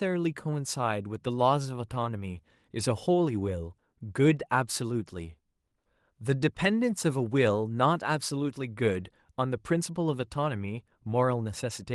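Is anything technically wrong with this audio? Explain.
No, nothing in this speech stood out as a technical problem on listening.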